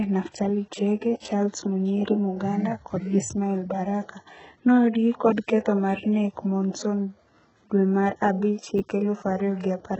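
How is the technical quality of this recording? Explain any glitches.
The recording has heavy codec damage throughout and one brief ordering glitch near the end.

Throughout, likely HE-AAC compression at a very low bitrate, around 8 kbps, rebuilds the treble from copied lower bands, leaving nothing above 8 kHz and making the s sounds gritty and metallic.

From 8.78 to 8.80 s, chunks out of order: a 10 ms chunk played one slot late, so the order jumbles across three hard joins, heard as a brief garbled moment.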